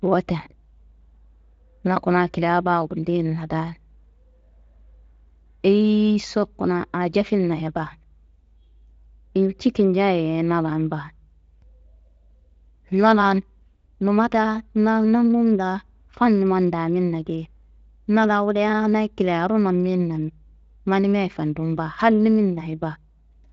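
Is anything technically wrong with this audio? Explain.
No, nothing is technically wrong.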